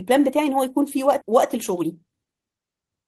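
At 1.21 to 1.23 s the speech lurches forward: one sound is cut off and the next follows almost instantly, with no silence or filler bridging the join. This is a skip ahead. Roughly 0.7 s of audio never reached playback, either lost in transit or discarded when the jitter buffer overflowed while later speech was already queued. Playback resumed from that later point, so the delay dropped by about the same amount and the two sides were spliced together.

From 1.31 s to 3.04 s the speech runs noticeably quick, about 118% of normal speed, yet its pitch stays unchanged. This is a jitter buffer speed-up. The buffer was holding more audio than it targets, so the receiver trimmed away brief slices one or a few pitch periods long, again and again, to shrink the backlog. Over this stretch the cuts remove around 0.3 s of speech, which is what gives it the hurried quality.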